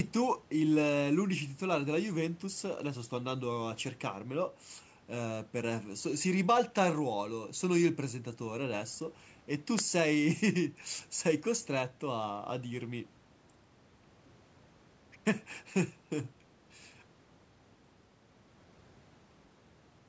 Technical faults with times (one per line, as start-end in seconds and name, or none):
none